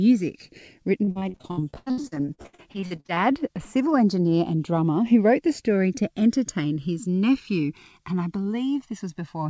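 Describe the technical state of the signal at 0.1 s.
At 0.1 s you're already in the channels drifting apart fault, which runs the whole clip. The two sides sit on clocks that disagree by something like 150 ppm, so the offset creeps toward about a millisecond, and summed to mono that reads as slow, sweeping flanging.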